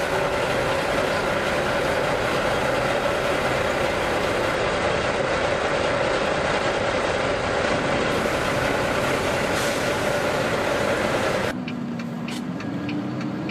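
From 4.55 s to 8.11 s the treble goes dull and a gritty, grainy noise rises under the sound, then both clear as quality returns. This is a Bluetooth SBC bit pool drop: under link congestion the encoder cut its bit pool, which fits a fall from about 28 to 12 and a rate near 96 kbps. The upper sub-bands were starved of bits and the remaining ones coarsely quantised until the link recovered.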